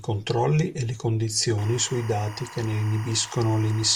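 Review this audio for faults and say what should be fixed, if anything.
Timecode bleed from 1.58 s to the end: 24 fps linear timecode leaks in, warbling between roughly 1 and 2 kHz about 20 dB below the speech. Route timecode on isolated, shielded cabling away from audio lines.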